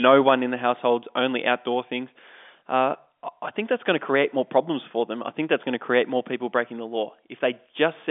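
Listening to this speech recording, carried over a G.711 telephone line with nothing passing above about 3.7 kHz, nothing stood out as a technical problem.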